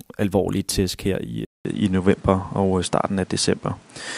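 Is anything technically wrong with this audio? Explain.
Yes. From 1.45 s, just after "alvorlige tæsk her i", the input likely switched to a poorer device: a 200 ms gap, then the speech goes duller with nothing above 10.6 kHz, shifts a few decibels in level, and gains a new noise floor about 30 dB down. That new noise, not just lost treble, separates it from a plain low-pass filter.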